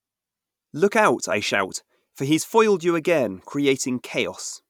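Speech clip, and from the start to about 2.86 s there's crude rate conversion: a faint gritty, inharmonic fizz, roughly 35 dB down, consistent with unfiltered linear interpolation from 44.1 to 48 kHz.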